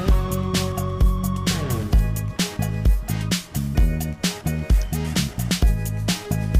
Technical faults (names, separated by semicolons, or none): none